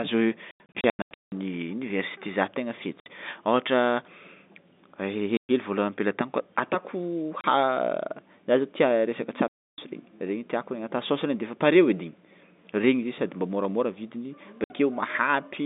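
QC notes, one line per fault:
0.51–1.32 s: packet loss filled with silence, about 540 ms of gaps scattered over 810 ms, longest 180 ms, with hard-edged holes.
3.00, 5.37–5.49, 7.41, 9.48–9.78 and 14.64–14.70 s (the last after "sady mba môramôra vidiny"): packet loss filled with silence, holes of 30 to 300 ms in 30 ms steps, which fits 30 ms packets.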